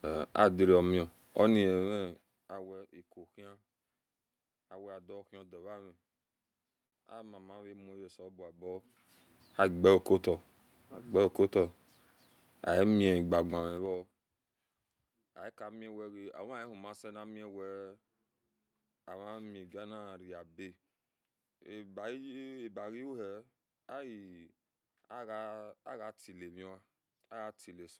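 Between 6.23 and 6.94 s, packets reached the receiver late, and the jitter buffer ran dry five times. The receiver stretched the last sound through each wait, 89 ms in total, the longest 54 ms, so the speech drags and stutters without losing anything, a repeated stall (stutter).

From 13.52 to 14.20 s, the level drops by about 25 dB in unsmoothed 3 dB steps, about ten per second. Each step clicks, so zipper noise ticks along on the speech while it fades.

At 22.99 to 23.32 s, the jitter buffer was holding more speech than it targets. The receiver trimmed short pitch-period pieces, roughly 40 ms altogether, to catch up. This jitter buffer speed-up runs the speech at 111% pace with unchanged pitch, so it sounds briefly hurried.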